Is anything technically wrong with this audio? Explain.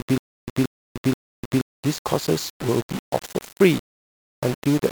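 Yes, two faults are audible.

Throughout, the speech has the grainy, signal-following distortion of low bit depth without dither. It was likely rounded to about 5 bits, leaving error only around 15 dB below the speech. On a waveform the quiet passages show coarse staircase steps. A spectrogram shows broadband hash that rises and falls with the speech.

From 0.0 to 1.61 s, a stutter with silent gaps is already under way. A 178 ms fragment repeats three times, once every 478 ms, with 300 ms of digital silence between. This is likely a stalled stream replaying its last buffer. The waveform shows identical blocks separated by flat silent stretches, and the spectrogram shows matching columns divided by empty gaps.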